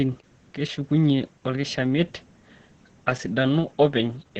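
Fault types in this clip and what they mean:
Opus voice compression: the speech runs through the SILK speech coder at a starved bitrate that sounds like about 10 kbps. The band stops near 8.9 kHz, so there's no air up top, and the coarse excitation coding leaves the speech throughout muffled, hoarse and a touch robotic.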